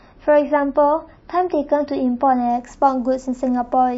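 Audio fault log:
0.0–2.5 s: adaptive stream starting at a low bitrate. The speech opens dull and smeary, with nothing above 5.8 kHz, which fits roughly 24 kbit/s MP3. At 2.5 s it switches without a gap to full treble and cleaner detail, consistent with 128 kbit/s once the connection was measured.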